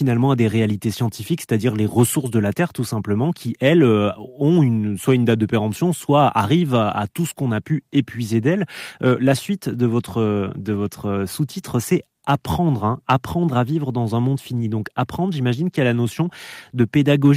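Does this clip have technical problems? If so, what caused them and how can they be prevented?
No, nothing in this speech recording stood out as a technical problem on listening, so there is no cause to trace or prevent.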